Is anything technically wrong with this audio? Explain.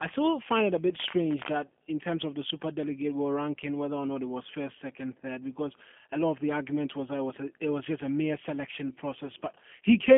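Yes. Throughout the speech the G.729 codec is plainly audible. The sound is confined to a telephone band of roughly 200 Hz to 3.4 kHz, with nothing above 3.6 kHz, which fits an 8 kbit/s G.729A link. The codec rebuilds each short frame from a vocal tract filter, a pitch predictor and a few coded pulses, so the voice comes out slightly rough and synthetic. Plain band-limiting would sound muffled but smooth. This has a grainy, buzzy texture as well.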